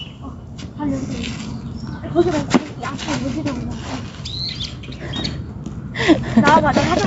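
Gain pumping runs throughout the clip, with the level swinging by around 5 dB. The likely cause is input gain set far too high, with a fast limiter or compressor clamping down on every peak and releasing in between. That squeezes loud and soft parts together and leaves the audio sounding squashed. The sound is also band-limited to 8 kHz by the call path, which is normal for this codec.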